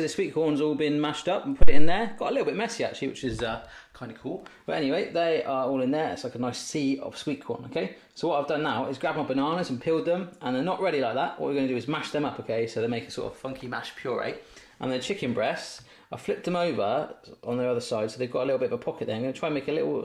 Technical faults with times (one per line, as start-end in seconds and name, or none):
1.62-2.02 phantom power thump